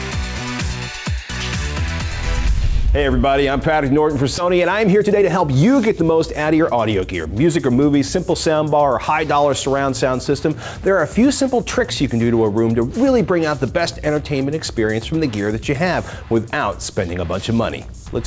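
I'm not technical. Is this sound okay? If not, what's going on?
No. At about 4.38 to 4.40 s there is a skip ahead: roughly 0.7 seconds of sound is simply missing, and playback jumps straight to later audio. Unlike a dropout, there is no silent gap, only an abrupt join where something should be.

Right after, from 4.48 to 7.80 s, a jitter buffer speed-up makes the sound run about 9% fast as the system trims tiny slices, about a third of a second in total, to catch up. The pitch stays the same, unlike a sped-up tape.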